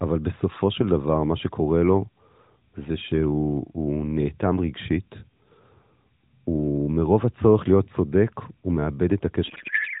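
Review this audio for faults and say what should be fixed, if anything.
From 9.48 s to the end at 10 s, the speech collapses into garbled noise and warble that barely tracks it. This is a codec payload misread: the AMR decoder parses frames with the fields in the wrong places, which fits octet-aligned packing being read as bandwidth-efficient. Before it, the audio carries the narrowband AMR sound, with nothing above 4 kHz and light coding damage consistent with the 12.2 kbps mode. To prevent it, make both ends negotiate and apply the same octet-align setting for the AMR payload.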